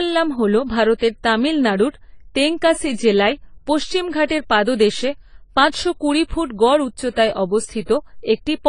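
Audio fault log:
Throughout: AAC compression. The speech sounds dull and smeared, with nothing above 10 kHz, and sibilants and held vowels carry a plainly audible warbling, fizzy texture. This is likely AAC-LC coding at a low bitrate, which fits something around 24 kbps. The encoder lowers its cut-off and quantises each frame's frequency lines so coarsely that parts of the spectrum drop out or are filled with substitute noise, leaving a swirling grain on sustained sounds.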